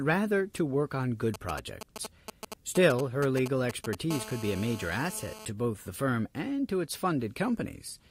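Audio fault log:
1.34 to 3.95 s, GSM signalling bursts: across this stretch of speech a galloping dit-dit-dit of ticks and short buzzes cuts in. That's a 2G phone close by sending just brief groups of radio bursts while it talks to the network, and the audio circuitry rectifies each one into a click or a snatch of 217 Hz buzz. It sits roughly 10 dB under the speech.
4.11 to 5.45 s, GSM phone buzz: now the pattern turns into a steady, hard, raspy buzz at 217 Hz, thick with harmonics and with nothing to do with the speech. That's the phone in an actual call, transmitting in bursts 217 times a second without a break, and the circuit demodulates the pulsed carrier into a continuous tone. It's about 14 dB below the speech.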